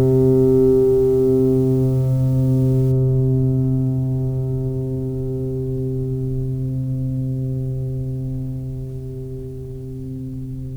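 From 0.00 to 2.92 s the music turns grainy and rough. The grit rises and falls with the sound. This is low bit depth without dither, likely from truncation to 7 bits. The error sits only about 30 dB below the music.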